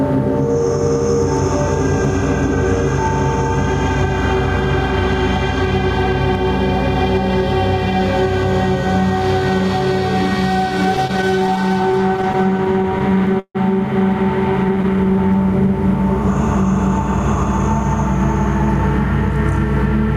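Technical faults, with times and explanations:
Throughout, gain pumping: the level swells in quieter stretches and background, then ducks by around 10 dB under each loud sound. This is likely an input gain set too high, with a fast limiter pulling it down. The waveform envelope looks flattened, and the noise floor rises and falls between events on a spectrogram.
10.97 to 13.57 s, repeated stalls (stutter): the playback halts 30 times, with the longest wait 151 ms. The receiver stretched the last sound to cover 442 ms, about 17% of that span, and lost nothing. The audio drags and stutters, and the spectrogram shows short smeared, repeated slices.
14.96 to 15.72 s, jitter buffer slow-down: the receiver repeated short pitch periods or pause fragments to rebuild its reserve, adding 78 ms. Playback runs at about 91% speed with unchanged pitch, so sounds are drawn out. Spectrogram features appear horizontally stretched, and the waveform shows repeating cycles.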